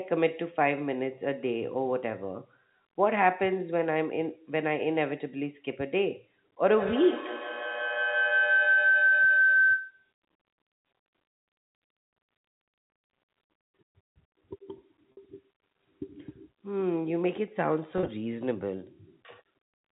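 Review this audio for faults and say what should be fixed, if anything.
Two brief buzzy holds break the speech, at 15.12 to 15.17 s and at 17.98 to 18.08 s. This is packet loss with pitch repetition. The receiver bridged each gap by looping the last pitch period, which freezes the tone into a short drone. The first gap is a single 50 ms loss, which fits about five 10 ms packets. The second is 60 ms lost in scattered runs over 100 ms, the longest 30 ms. The G.711 telephone coding carrying the call adds at most faint damage of its own. A larger jitter buffer, or forward error correction on the link, would stop these gaps from reaching the listener.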